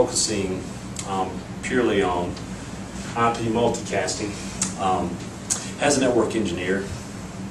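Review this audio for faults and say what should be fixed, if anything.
Nothing here needs fixing, since no faults turn up anywhere in the recording.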